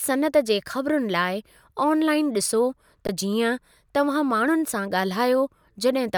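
At 3.07 s the speech drops into a brief flat stretch lasting about 17 ms: an underrun with held sample. The output buffer ran dry and the converter froze on its last value, so the sound stops almost without a click. Roughly 20 ms of live audio was skipped, so it resumes with a click.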